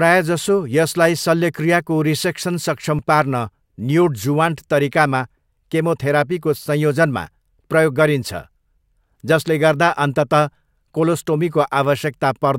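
Nothing stood out on listening to this speech recording.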